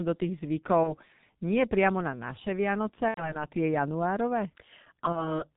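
The whole clip goes through the G.723.1 codec, heavily damaged. The speech is muffled and hoarse with smeared consonants and nothing above 4 kHz, which fits its roughly 6.3 kbit/s mode.

VoIP packet loss concealed by the speech codec hits at 0.83, 3.08 and 5.13 s. Gaps of 30, 90 and 30 ms get filled with a fading buzzy tone or coloured noise, and the speech stays weak until about 0.94, 3.45 and 5.43 s.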